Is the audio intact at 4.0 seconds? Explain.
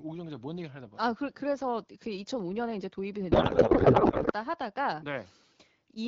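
No. At 4.0 s the speech sits inside a codec payload misread, which runs from 3.31 to 4.33 s. The decoder unpacks the AMR bits in the wrong layout, likely octet-aligned frames read as bandwidth-efficient. The speech becomes garbled noise and warble that barely tracks it.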